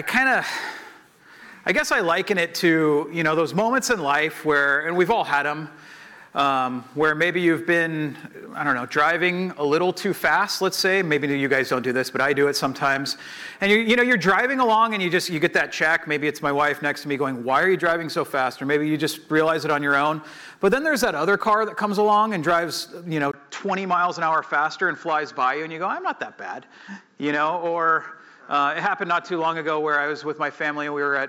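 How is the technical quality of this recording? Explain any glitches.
The recording has one clear fault: from 23.32 s to the end, the sound turns duller, consistent with an input switched to a poorer device. A 20 ms silence marks the switch, likely the system changing microphones or moving to a headset's narrower call profile. Afterwards nothing reaches above 7.6 kHz, and a faint new noise floor sits far below the signal while loudness stays roughly the same. A spectrogram shows the upper band cut off flat from that point. The waveform shows a brief gap there but no step in level.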